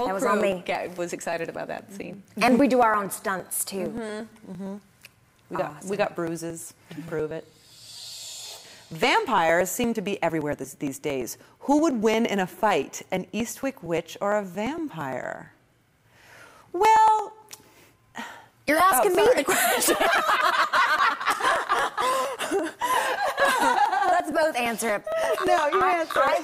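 Periodic USB or driver dropouts: audio skips roughly 10 ms every 0.115 s from 0.06 to 26.28 s, leaving evenly spaced ticks and thin vertical spectrogram lines.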